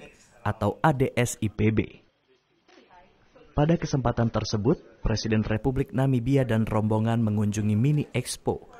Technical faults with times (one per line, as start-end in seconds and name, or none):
1.56-5.56 adaptive stream at a lower bitrate